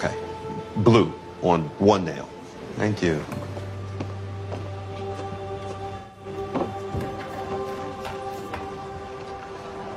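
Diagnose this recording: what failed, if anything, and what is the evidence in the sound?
The fault sits in the codec stage: AAC frame loss with concealment. At 0.52 to 0.58 s there is a brief smeared, noisy patch lasting about 43 ms, which fits one lost frame. At 5.98 to 6.26 s a longer patch runs about 171 ms, which fits four lost frames. In both gaps the decoder had no data. It rebuilt the missing stretch from the last good spectrum, so the detail blurs into a textured smear.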